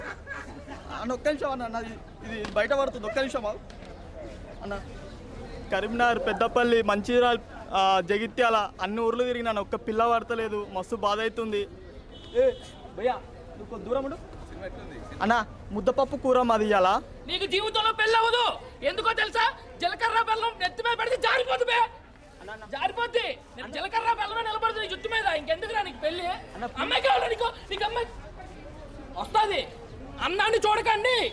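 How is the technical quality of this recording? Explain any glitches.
No glitches can be heard anywhere in the recording, and the signal holds steady and intact throughout its whole duration.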